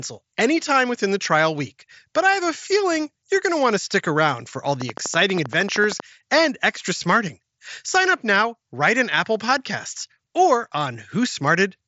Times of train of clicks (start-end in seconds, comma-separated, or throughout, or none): 4.81-6.01